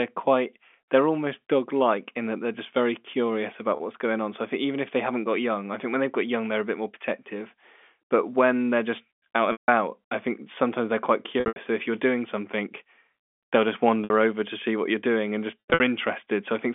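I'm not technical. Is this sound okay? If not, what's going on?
No. Packet loss with pitch repetition breaks the speech five times: at 3.76, 9.52 to 9.68 (after "just out"), 11.40 to 11.56 (after "think sometimes they're quite"), 14.04 to 14.10 (after "they'll just"), and 15.60 to 15.80 seconds. Bits of the signal went missing in transit, and the receiver covered each gap by repeating the last sliver of voice, which sounds like a brief buzzy hold that fades before speech resumes.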